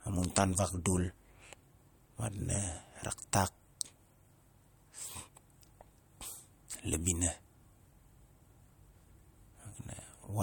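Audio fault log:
0.00–3.37 s, overlap-add ripple: the speech level swells and dips by about 6 dB around 200 times a second, giving a metallic buzz with extra tones around each note, because the frames were rejoined with an overlap that doesn't sum to constant gain. The waveform envelope is evenly scalloped.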